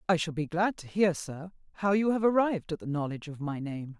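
Nothing goes wrong anywhere in this short bit of speech, so there's no fault to point to at any moment.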